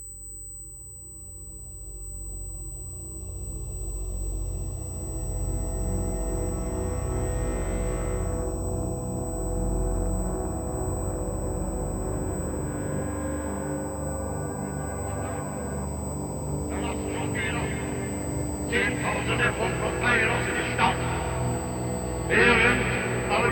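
USB whine runs throughout the clip as a steady, fixed-pitch tone at 8 kHz, sitting roughly 15 dB below the audio. The bus draws current in 125-microsecond microframes, and that periodic load leaks into the audio path through shared power or ground, producing this high, thin whistle.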